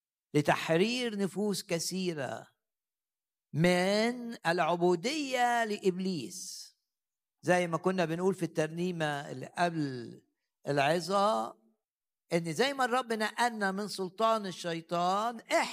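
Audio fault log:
No fault can be heard anywhere in this speech recording. Nothing in it calls for a timed entry in this log.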